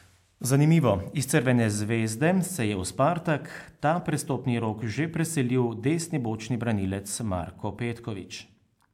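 Speech recording with no audible technical faults at any point.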